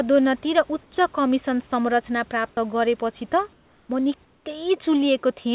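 At 0.83 s, right before "कमिसन संरचना", comfort noise replaces the background for 90 ms: the room's natural background turns flat and featureless, about 2 dB quieter. The likely cause is the sender pausing transmission while the receiver fills the gap with synthetic noise. At 2.55 s there's an onset clipped by the voice detector. The sound jumps in abruptly with its first 20 ms gone, likely because the detector noticed the restart late. The same comfort-noise swap returns from 3.53 to 3.89 s and from 4.25 to 4.46 s, both times about 3 dB down from the real background, all of it sitting in a band with nothing above 4 kHz.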